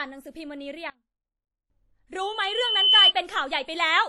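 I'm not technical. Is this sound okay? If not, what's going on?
No. Three separate problems can be heard in this speech clip.

Throughout, the speech has a smeared, ringing quality, with a hiss that rises and falls along with the talking, and the very top of the sound is cut off, with nothing above about 15.2 kHz. This is likely WMA compression, squeezed hard enough that the damage is plainly audible. Unlike plain background hiss, which stays steady, this hiss breathes with the speech.

From 0.9 to 1.7 s, the speech suddenly drops to a faint shadow of itself, then returns. The likely cause is one channel inverted: one side of the stereo signal is flipped upside down, so when the two sides are combined, the shared centre of the sound, where the speech sits, cancels out. It differs from a dropout because a weak trace of the speech remains rather than silence.

From 2.20 to 3.13 s there is a loudspeaker feedback squeal: a single high tone at 3 kHz that swells up over roughly 0.7 s until it is much louder than the speech. 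It happens when a microphone picks up the speaker it is feeding, and that one pitch keeps amplifying itself around the loop. Unlike a deliberate beep, it grows on its own rather than starting at full strength.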